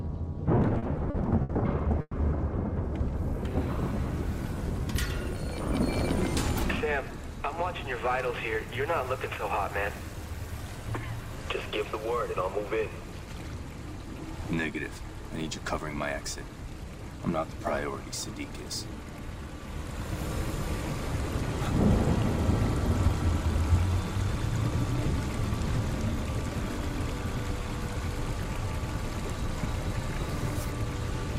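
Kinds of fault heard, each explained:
Repeated stalls (stutter): From 0.55 to 2.15 s the audio halts seven times as incoming data fails to keep pace, and each gap is bridged by stretching the last sound, 290 ms in all, with the longest hold at 110 ms. Nothing is lost, yet the passage drags and hiccups. On a spectrogram the held moments show as short horizontal smears of frozen harmonics, and the waveform shows repeated near-identical cycles, fading in the longer holds.
Jitter buffer speed-up: Where the receiver has too much audio queued, it trims away tiny slices of a pitch period or two to catch up, so the sound runs quicker at unchanged pitch. This happens three times: at 102% from 8.57 to 10.15 s, about 40 ms removed; a brief 112% burst from 16.48 to 17.00 s, about 70 ms removed and clearly hurried; and a gentle 101% from 24.68 to 30.65 s, about 70 ms removed. Spectrograms show unchanged harmonic spacing with events slightly compressed in time, and waveforms show small periodic splices.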